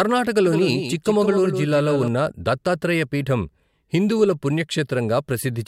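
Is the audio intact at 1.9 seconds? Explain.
No. At 1.9 s the speech is heard twice: a doubled audio track runs from 0.46 to 2.08 s, ending just before "దత్తాత్రేయ పీఠం హిందువుల". A second full-band copy trails the original by about 150 ms at roughly 10 dB quieter, likely from the signal being captured again through a slower path. Unlike an echo or reverberation, there is only one copy, with no decay or room colour, and it cuts in and out abruptly.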